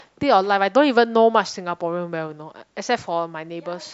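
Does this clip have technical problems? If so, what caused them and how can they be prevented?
No, nothing in this speech clip points to a technical fault, so there is no cause to trace and nothing to prevent.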